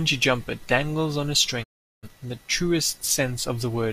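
A digital broadcast dropout runs from 1.62 to 2.08 s: the speech fades out over about 20 ms into silence, as the receiver mutes on lost or corrupt frames, and roughly 384 ms of programme, consistent with nine frames, simply never returns.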